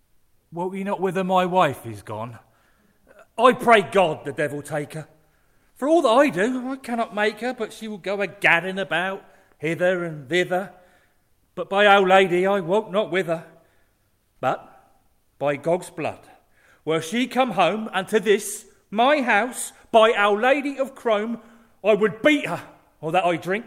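No technical faults are audible anywhere in the recording.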